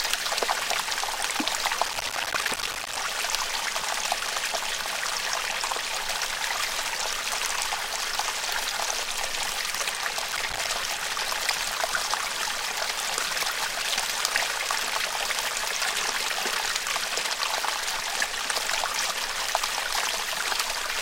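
A recording of everyday sounds with processor overload crackle from 1.86 to 2.97 s and again from 10.32 to 10.67 s. Repeated missed buffer deadlines leave dozens of short silent holes, which fits buffers of about 5 ms. The waveform shows many flat gaps, and the spectrogram shows a dense row of thin broadband vertical streaks.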